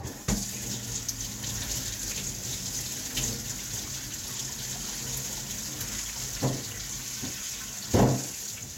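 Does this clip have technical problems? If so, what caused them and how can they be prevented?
No, nothing faulty is audible.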